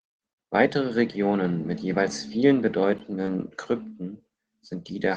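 At 3.25 to 3.29 s there is a short concealed packet loss: about 20 ms of the speech never arrived, and the receiver papered over the hole by extending the preceding sound and then blending back into the real signal. It comes across as a brief smear or wobble rather than silence or a sharp click, which separates it from a plain dropout. The call codec's band limit near 12 kHz applies throughout.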